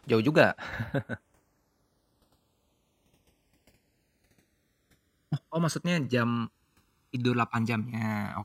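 Throughout, the channels drift apart: separate clocks about 100 ppm out let the delay grow to roughly a millisecond, so mono sweeps comb notches, slow flanging, visible as gliding spectrogram stripes.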